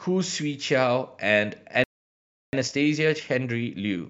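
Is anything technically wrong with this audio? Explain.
Yes, there are two linked faults.

At 1.84 s the speech halts mid-flow and stays silent for about 0.69 s, resuming at 2.53 s. This is a playback stall, likely the player running short of data or its output thread being held up. Unlike a brief dropout click or gap, the silence lasts long enough to clearly interrupt delivery.

From 2.53 s to the end, the speech runs about 1.25 times faster while keeping its normal pitch. This is time-compressed catch-up: the player trims its accumulated backlog by removing small slices and cross-fading across the joins. A plain speed-up would raise the pitch along with the pace; this one does not.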